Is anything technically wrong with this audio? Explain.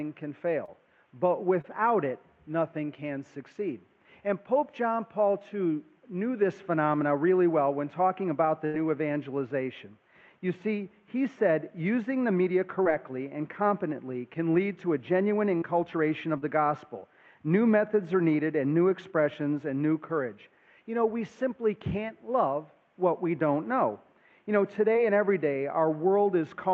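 Yes. There are short concealed packet losses at 0.65, 1.61, 12.84, 15.57, 16.38 and 24.93 s, each about 20 ms (about 40 ms at 15.57 and 16.38 s). The receiver extended the preceding sound to fill each hole, heard as a brief smear or wobble. On a spectrogram, the harmonics or noise simply continue unchanged for that sliver.

A burst of packet loss runs from 8.66 to 8.76 s, with about 80 ms missing. The last sound was continued and faded, so it becomes a held buzz or dying hiss before the audio resumes further on. The waveform shows a decaying stretch, and the spectrogram shows frozen, fading bands. The call codec's band limit is also visible, with the spectrogram empty above about 8 kHz.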